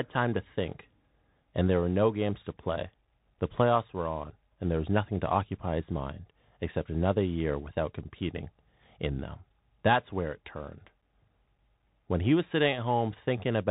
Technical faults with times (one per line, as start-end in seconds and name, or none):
0.00-13.71 Bluetooth CVSD headset codec